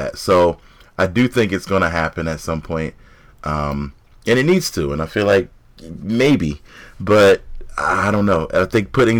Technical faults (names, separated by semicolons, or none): hard clipping